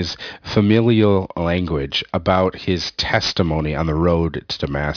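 Throughout the clip, the audio shows aliasing. The sample rate was cut sharply, which fits a drop from 44.1 kHz to about 11 kHz, with no low-pass filter in front, so energy above the new 5.5 kHz limit was folded back down into the band. In this speech, sibilants and breathy consonants take on a gritty, metallic edge with false tones that track nothing in the voice. The folded content sits perhaps 15 dB below the signal, and the spectrum stays dense right up to 5.5 kHz.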